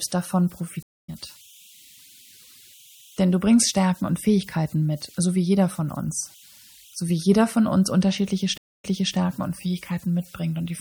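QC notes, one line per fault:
Throughout: converter idle tones. A faint whistle sits near 3 kHz, about 31 dB below the speech. It is clearest in the pauses and turns into a grainy texture under the quieter syllables. An undithered delta-sigma converter fed a very small input settles into repeating bit patterns, and those patterns produce a tone whose pitch is set by the input offset.
Throughout: MP3 compression. The speech has plainly audible coding damage. The sibilants turn swirly and metallic, and consonant onsets smear. The likely cause is MP3 encoding at a low bitrate, which fits a rate around 64 kbps. Short of bits, the encoder drops the treble and zeroes weak frequency lines, and those lines switch on and off between frames, which produces the watery shimmer.
0.83–1.10 s and 8.58–9.15 s: stream reconnect. Each event has a dropout of about 0.25 s, after which the audio picks up at a different point. 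At 0.83 s it resumes roughly 0.2 s further on, so a short stretch is skipped. At 8.58 s it comes back 0.31 s earlier, so material repeats. Both fit the link dropping, the player going quiet, and a fresh decoder starting mid-stream from wherever the server resumed sending.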